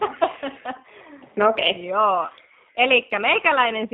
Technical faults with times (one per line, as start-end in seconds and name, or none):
0.00-3.93 G.729 codec
2.27-2.32 VoIP packet loss concealed by the speech codec